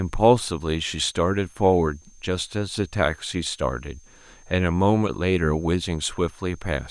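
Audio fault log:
throughout, switching supply whistle: a switching power supply near the audio path is cycling at an audible rate, leaking a thin high whistle that wanders between 6.3 and 6.4 kHz, sitting roughly 35 dB below the speech.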